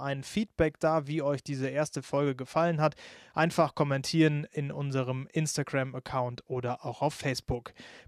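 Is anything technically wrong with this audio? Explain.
No, nothing stood out as technically wrong on listening to this speech clip.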